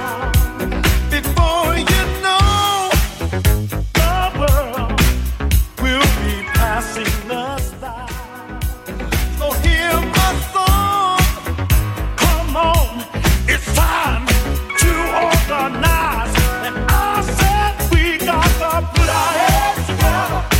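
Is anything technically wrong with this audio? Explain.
No, nothing is technically wrong with this audio.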